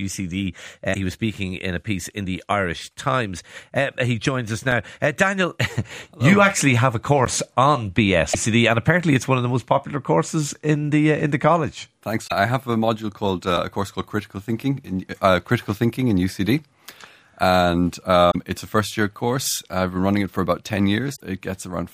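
Damaged data in the compressed stream at 0.90–0.96 s gives a glitch as the decoder loses frame sync. Blocks of digital silence follow at 4.72 s, lasting 1 ms, and at 7.25 s, lasting 11.6 ms, which fits a 512-sample buffer going unfilled. These are heard as ticks or dips, with no garbled tone. Further stream damage is heard at 8.30–8.35 s and 12.24–12.32 s. A 5.8 ms silent block at 13.57 s fits a 256-sample buffer. The last corrupted frames fall at 18.27–18.36 s and 21.15–21.21 s.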